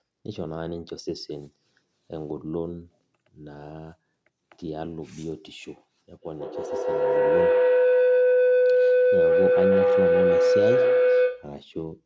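Feedback howl runs from 6.17 s to 11.66 s. Two devices sharing the room and the call let the loudspeaker's output re-enter the microphone with more gain each pass, so repeats grow rather than decay and narrow toward the loop's favoured frequency, a tone around 500 Hz. The loop's delay is roughly 150 ms, and the howl peaks about 9 dB above the speech before stopping. The call's band limit, with nothing above 8 kHz, is normal processing.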